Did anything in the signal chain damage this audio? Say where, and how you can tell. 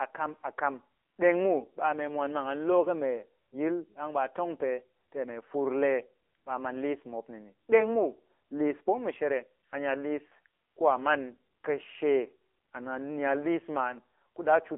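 Yes, at the codec. AMR narrowband mobile coding runs throughout: nothing above 3.5 kHz, thin low end, buzzy synthetic speech. That fits a low 7.4 kbps mode.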